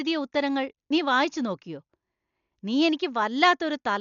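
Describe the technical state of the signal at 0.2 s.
At 0.2 s, as throughout the clip, likely Dolby Digital compression at a rate near 48 kbps strips mantissa bits and cuts everything above 6.9 kHz, leaving dull, rough, fluttering speech.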